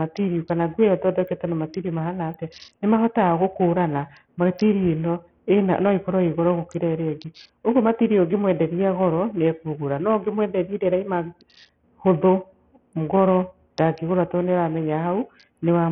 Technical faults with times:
0.00-15.92 Bluetooth SBC compression

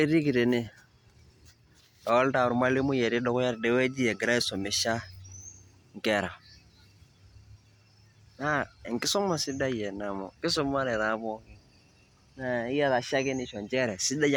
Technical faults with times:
none

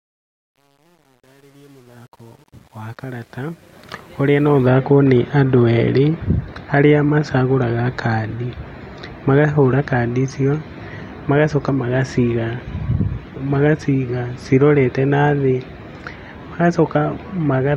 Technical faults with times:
0.00-4.67 truncation distortion on a fade

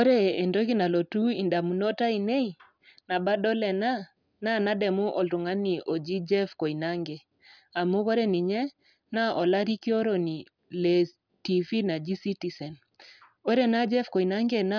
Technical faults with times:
none

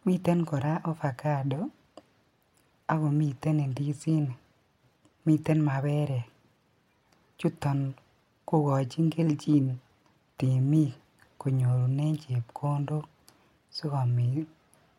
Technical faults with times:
none

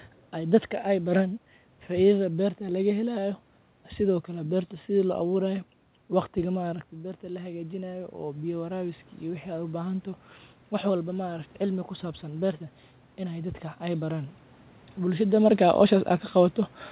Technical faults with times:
6.61-10.12 automatic gain rising

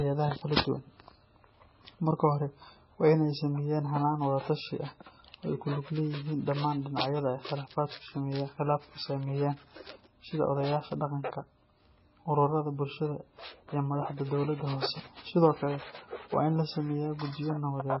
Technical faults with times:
0.00-18.00 MP3 compression

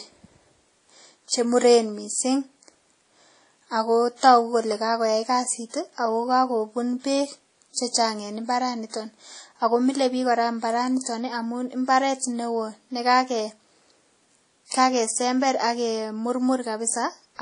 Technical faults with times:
0.00-17.41 transcoding between lossy codecs

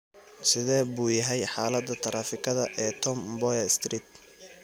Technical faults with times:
none

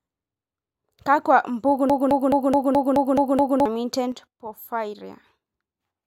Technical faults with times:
1.90-3.66 broken-record loop
4.12-6.06 sudden gain jump

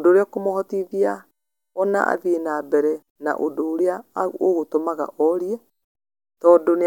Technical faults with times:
none

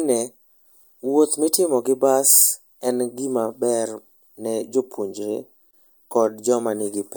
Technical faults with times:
5.71-5.73 gap at a join of encoded pieces

